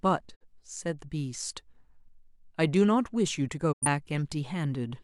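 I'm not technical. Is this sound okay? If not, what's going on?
No. The speech twice fades to silence for a moment, at 0.34 to 0.44 s and at 3.71 to 3.87 s. This is a digital broadcast dropout. Unlike a crackly analogue fade, the sound mutes cleanly, and whatever was said in those gaps is simply gone.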